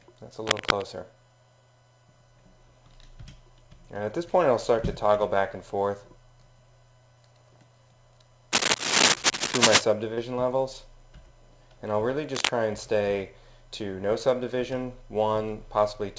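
The audio carries three bursts of cable scratch noise: 0.43 to 0.83 s, 8.52 to 9.81 s and 12.34 to 12.50 s. Each is a dense, irregular scratching laid over the sound, about level with the signal in the first burst and somewhat louder in the later two. The likely cause is a worn cable or connector being moved, with its contact resistance fluctuating rapidly. At 10.14 to 10.18 s there is a short concealed packet loss. Roughly 30 ms of audio failed to arrive, and the receiver filled the gap by extending the preceding sound before blending back. This leaves a brief smear or wobble. The call path itself shows nothing above 8 kHz, consistent with a wideband call codec such as G.722.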